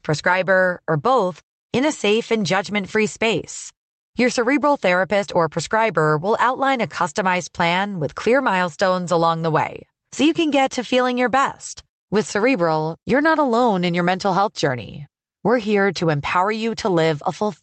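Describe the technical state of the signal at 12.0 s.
At 12.0 s the audio is intact, with no dropout, glitch or other fault, and the call path carries it through as normal.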